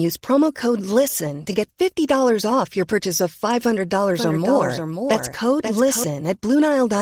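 From 4.14 to 6.04 s a doubled audio track, likely a second capture path, lays a quieter copy half a second behind. It cuts in and out abruptly, without an echo's decay.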